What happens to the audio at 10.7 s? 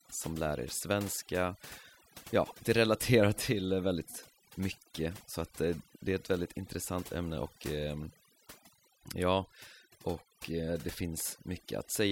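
At 10.7 s the speech is still carrying the overdone noise removal that runs through the whole clip. A noise reducer set far too aggressively is shutting off individual frequency bands whenever they sit close to its noise estimate, taking the softer parts of the voice along with them. The background drops and breaks up into twinkling specks. On a spectrogram the gaps show as a dark floor dotted with isolated bright flecks, and the speech harmonics look ragged and patchy.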